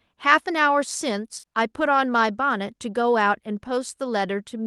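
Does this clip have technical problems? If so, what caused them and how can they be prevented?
Yes. Short concealed packet loss occurs between 1.39 and 1.45 s. About 40 ms of audio never reached the decoder in time, so the receiver continued the preceding sound to fill the hole and then blended back into the real signal, leaving a brief smeared wobble. A larger jitter buffer, forward error correction on the link, or a more stable network connection would prevent it.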